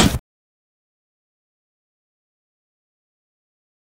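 No technical faults can be heard anywhere in this clip.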